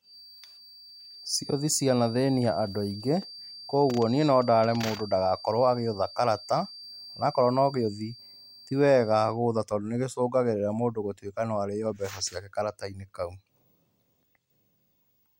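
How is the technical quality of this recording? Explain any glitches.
The recording has one clear fault. From 0.0 to 9.41 s there is a feedback whistle, likely from a loudspeaker-to-microphone loop held just short of runaway, leaving a thin 4.7 kHz tone that slowly swells and fades, about 20 dB beneath the speech.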